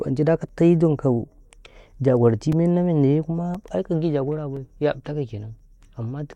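From 0.49 s to 5.59 s the speech carries periodic USB or driver dropouts. A short tick repeats every 1.02 s, about seven times. Each tick marks a gap of a few milliseconds where the audio drops to silence. Something in the system is stalling the USB bus or audio driver on a fixed schedule. The stream briefly stops each time. The ticks sound only while speech is present.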